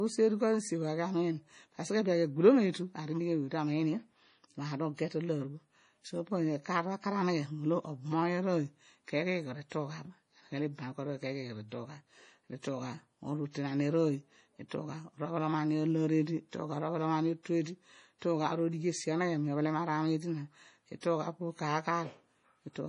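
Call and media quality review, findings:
Likely MP3 compression, heavy, throughout: encoder starved of bits, consistent with roughly 32 kbps, cutting treble and dropping weak frequency lines frame to frame. Nothing above 10.5 kHz; watery, swirly speech with chirpy s sounds.

Pre-echo, 14.69–14.71 s: transform block spreading quantisation noise ahead of a late attack. Short hiss, about 27 ms, before the onset; attack smeared and softened.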